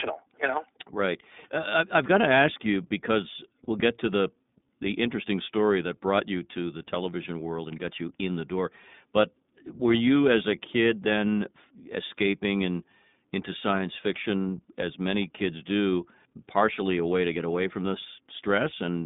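Speech coded with the iLBC codec throughout, its band held to roughly 150 Hz to 3.7 kHz and its tone plainly rough and synthetic, which fits the 15.2 kbps mode rather than a merely band-limited line. Lost iLBC frames appear from 3.64 to 3.69 s, between "to ask you because" and "get to the the". That 40 ms gap, which fits two dropped 20 ms frames, is filled with a brief buzzy held vowel. Unlike a dropout, the gap is not silent, and the voice recovers immediately afterward.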